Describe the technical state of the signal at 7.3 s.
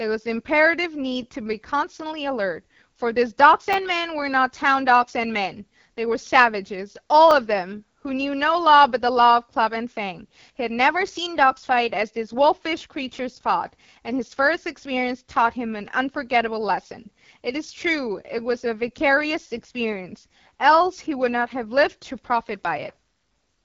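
At 7.31 s a repeated buffer occurs: new audio arrived late, so the playback device replayed its last block once, which fits a 10 ms buffer. With so short a piece sounding twice, the hard join is heard as a brief click rather than a stutter, with no audio lost.

Across this moment the AMR wideband (HD Voice) codec is also at work, at a low rate that fits 8.85 kbit/s. Its pulse-driven model leaves the speech rough and raspy, with plainly audible damage and nothing above 7.3 kHz.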